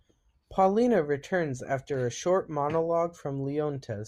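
A speech recording, and nothing is technically wrong with it.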